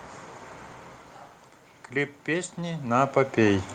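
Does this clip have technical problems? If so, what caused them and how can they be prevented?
Yes. From 2.25 to 3.73 s there's automatic gain rising: the input dropped by about 12 dB, and the AGC gradually pushed its gain up about 5 dB, so voice and room noise swell together. Setting a fixed input level with AGC off would prevent it.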